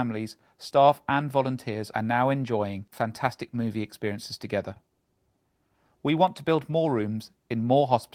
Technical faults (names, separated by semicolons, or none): none